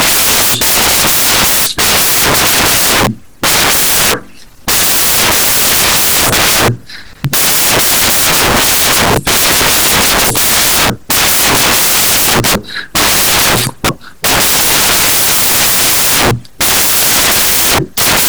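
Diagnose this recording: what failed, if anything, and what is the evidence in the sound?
The failure is at the sample-format conversion stage: samples built from the wrong bytes. From start to finish the recording is loud, harsh broadband noise. That pattern gives it away. The bytes in each sample are being assembled wrongly, whether swapped, shifted by one or misaligned, so the jittery low-order bits land in the high-order position and swamp the real signal.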